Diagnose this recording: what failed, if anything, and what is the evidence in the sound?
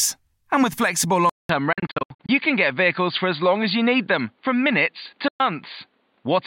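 From 1.29 s to the end the sound turns dull and boxy. Nothing remains above 4.7 kHz, a 200 ms silence marks the change, and a new noise floor sits about 45 dB down at an unchanged level. This is likely an input switched to a poorer device at the driver stage. A codec lowpass would not bring the gap or the new noise.

From 1.73 to 2.29 s, about 300 ms goes missing in scattered holes, the longest 70 ms. From 5.28 to 5.40 s, about 116 ms vanishes. The sound resumes further on rather than stretching, which points to a likely Bluetooth dropout on the playback link, not buffer stalling.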